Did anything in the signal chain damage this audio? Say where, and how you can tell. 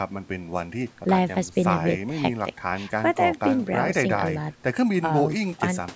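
No, only the normal call microphone processing is audible.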